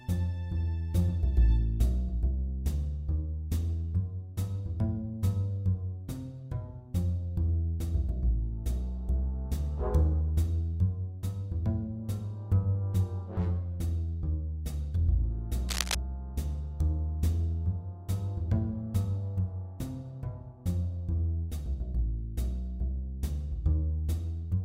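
The audio has one fault, a burst of cable scratch noise from about 15.68 to 15.95 s: roughly a quarter-second of dense, ragged scratching sitting just a few dB under the sound. It's likely a worn lead or connector being shifted mid-take.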